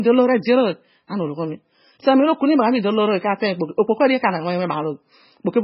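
Speech, and the whole thing carries heavy MP3 compression damage, likely from a very low bitrate, around 16 kbps. Nothing survives above 5.5 kHz, so it's dull, and the starved encoder leaves a watery, swirly texture with smeared consonant attacks.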